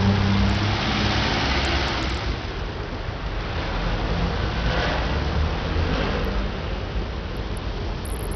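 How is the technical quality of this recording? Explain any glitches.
Poor, with heavy codec damage throughout. The likely cause is Bluetooth SBC compression starved of bits, which fits a bitrate around 64 kbps: nothing survives above 13.4 kHz, and gritty, flickering noise covers the whole sound.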